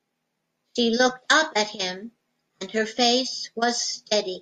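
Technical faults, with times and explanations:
No faults can be heard anywhere in this speech recording.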